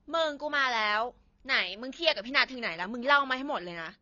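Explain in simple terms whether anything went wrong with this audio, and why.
The speech sounds dull and smeared from start to finish, with nothing above 6.9 kHz. This is likely AAC compression discarding detail to save space.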